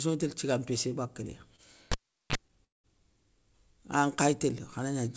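Speech carried over a call path whose band stops at 8 kHz, consistent with G.722 at 64 kbps, has three faults. A short stall from a late packet at 1.56 to 1.60 s holds the sound for about 24 ms with a faint buzz or dip, and nothing is lost. The playout simply runs 24 ms later. A spectrogram shows a thin slice where the harmonics turn into flat horizontal streaks. From 1.92 to 2.36 s a cable pulled and plugged in gives a pop and then about 390 ms of near silence. A roughly 31 ms burst of 50 Hz mains buzz follows as the tip makes contact, then a second pop. On the waveform these appear as a sharp spike, a flat line, a small regular ripple and another spike. A call audio freeze at 2.65 to 2.86 s inserts 190 ms that was not in the original. A brief fading buzz or hiss is followed by about 180 ms of silence, and the speech then resumes exactly where it stopped with nothing missing. The likely cause is packets held up in transit that left the jitter buffer empty. 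It shows as a short smear tapering into a blank vertical band on the spectrogram.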